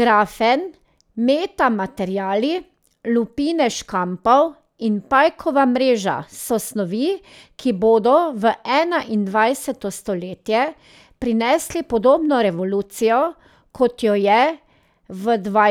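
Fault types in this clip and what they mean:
Nothing in this speech recording stands out as a technical fault, so there's nothing to list here.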